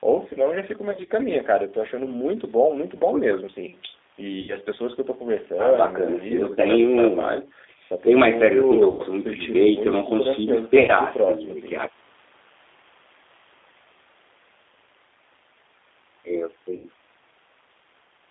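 Throughout, the speech carries plainly audible G.729 codec damage. At 8 kbit/s, each 10 ms frame is rebuilt from a vocal tract filter, a pitch predictor and a few pulses. The band runs from 300 Hz to 3.6 kHz. The voice sounds thin, rough and slightly synthetic.

VoIP packet loss concealed by the speech codec breaks in at 0.91 s, 4.41 s, 8.90 s, 10.79 s and 16.76 s. The first spot is scattered dropouts, and the rest are briefer, each under 0.2 s. The decoder stretches its last pitch and filter, so the sound turns into a buzzy tone or coloured noise and fades before recovering.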